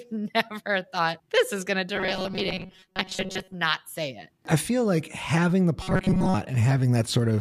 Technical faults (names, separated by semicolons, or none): robotic sound from repeated short buffers